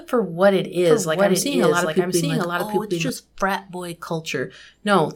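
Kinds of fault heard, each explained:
Doubled audio track: from 0.77 s, just after "for what it", to 3.09 s, before "frat boy", a second full-band copy of the speech runs about 0.7 s behind the first and roughly 5 dB quieter. It has no reverb tail or room colouring, and it cuts in and out abruptly at both ends. This likely comes from the signal being captured a second time through a slower path and mixed back in.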